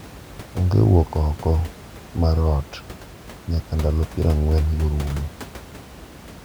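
Nothing stood out on listening to this speech recording, where the only background is the room's own noise, sitting about 19 dB below the talking.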